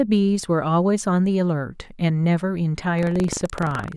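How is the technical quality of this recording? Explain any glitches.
The speech has one glitch, buffer tearing, from 2.94 s to the end. Writer and reader have slipped, splicing a small slice of audio about 150 ms stale into each buffer, causing a 23.4 Hz robotic rattle consistent with 1024-sample buffers.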